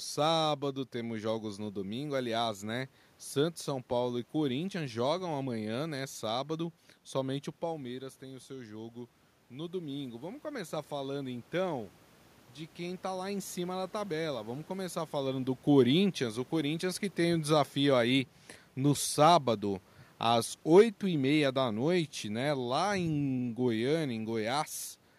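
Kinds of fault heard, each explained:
Automatic gain rising: After the talker moves back from the microphone around 7.5 s and the input drops about 11 dB, the gain control raises its gain about 5 dB from 7.68 to 11.5 s. Unlike a talker stepping closer, the room noise swells with the voice.
Automatic gain falling: From 15.69 to 24.03 s, after the talker shifts position near 15 s, the gain control lowers its gain about 6 dB over roughly eight seconds. Unlike a talker leaning away, the room noise sinks along with the voice.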